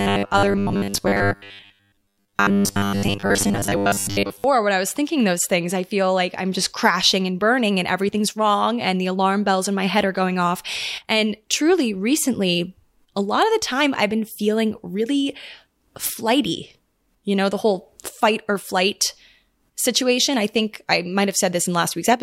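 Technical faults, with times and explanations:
0.01 to 4.44 s, robotic sound from repeated short buffers: the speech turns into a stiff, metallic buzz locked at 100 Hz, clearing just before "when I was thinking". Likely a 10 ms chunk replayed whenever new audio ran late, with most of the real signal skipped.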